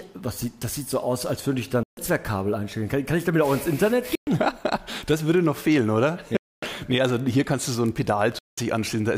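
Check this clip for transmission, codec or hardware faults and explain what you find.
Four short gaps interrupt the audio, at 1.83 to 1.97 s, 4.15 to 4.27 s, 6.37 to 6.63 s and 8.39 to 8.58 s, most likely a Bluetooth dropout. Packets missed their delivery deadline and were discarded, so the output falls silent for about 140, 116, 255 and 186 ms. Each time, the sound returns further along, as though it had kept playing through the gap.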